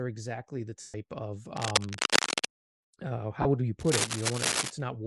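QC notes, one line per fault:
throughout: Bluetooth LC3 compression, likely at around 48 kbps with 10 ms frames. Speech has a plainly breathy, grainy edge, and the spectrogram shows noise-filled, patchy upper bands.
0.81–0.94 s and 3.42–3.45 s: lost LE Audio frames, about 130 ms after "exactly the" and 30 ms just before "would you". The decoder repeats the last spectrum with scrambled signs, producing a noisy smear that appears as a smeared, fading block on the spectrogram.
1.57–2.45 s and 3.8–4.72 s: cable scratch noise, the second starting after "would you" and likely from a worn cable or connector. Dense, uneven scratching bursts about as loud as the speech or slightly louder appear as ragged broadband spikes on the waveform.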